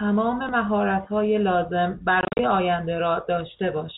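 From 2.21 to 2.39 s the speech breaks into a flurry of dropouts, about 130 ms silenced across 180 ms, none longer than 40 ms. This is packet loss filled with silence, with gaps that fit 10 ms packets, heard through a band-limited G.711 telephone line.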